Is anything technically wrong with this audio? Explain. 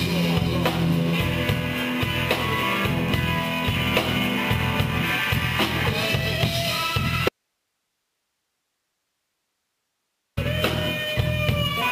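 Yes. There is an audio dropout to a faint residue from 7.29 to 10.37 s, lasting about 3.1 s. The sound cuts off abruptly, with no fade. For the length of the gap only a soft hiss remains, roughly 55 dB below the normal level. The sound then returns just as suddenly. The cause is likely a break in the signal feed while the later stages of the path stayed live, passing only their own noise.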